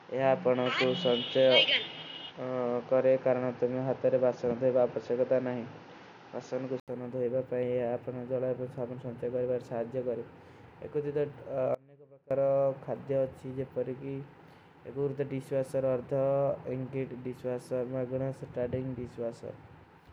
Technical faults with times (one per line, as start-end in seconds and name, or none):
0.00-6.88 input switched to a poorer device
11.75-12.31 audio dropout to a faint residue